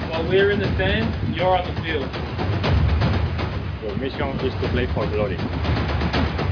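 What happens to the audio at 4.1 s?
Nothing goes wrong at 4.1 s; the audio plays through that moment intact, with no dropout, click or other audible fault.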